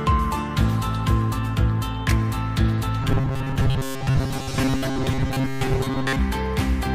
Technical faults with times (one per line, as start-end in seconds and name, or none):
3.02-6.19 robotic sound from repeated short buffers